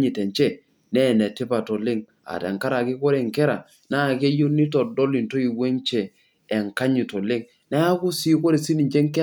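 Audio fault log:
Nothing stood out on listening to the speech.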